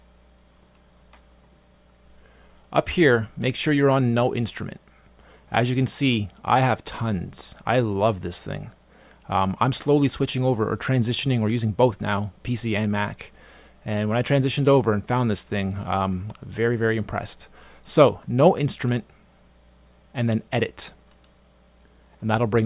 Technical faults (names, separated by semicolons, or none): none